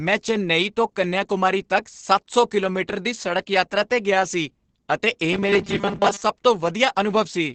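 Throughout the speech, Opus voice compression is audible. Nothing remains above 8.6 kHz, so the top of the wideband range is gone. The damage is heavy. Speech sounds muffled and hoarse, with a slightly robotic edge. The codec has to describe the voice's excitation very coarsely, which fits a low bitrate of about 10 kbps in its speech-oriented SILK mode. Fine detail is lost.

From 5.33 to 6.21 s, a robotic sound from repeated short buffers takes over. The voice becomes a rigid, metallic buzz at 200 Hz that still roughly tracks the speech. That pitch points to a 5 ms piece of audio played over and over. The likely cause is audio arriving too late, with the player repeating its last buffer to fill the gaps. Most of the real sound in that stretch is skipped.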